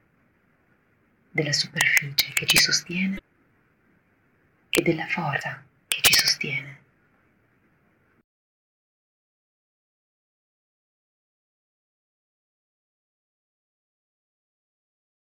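Integer overflow hits the audio from 1.81 to 2.59 s and from 5.92 to 6.28 s, driven about 7 dB past full scale, and briefly from 4.75 to 4.78 s at about 3 dB over. Peaks that should have been limited wrap to the opposite sign, giving violent cracks far harsher than clipping. Damaged data in a compressed stream causes short disruptions from 3.15 to 3.19 s and from 5.37 to 5.41 s, where corrupted bytes make the decoder misread frames and lose sync until it finds the next valid header.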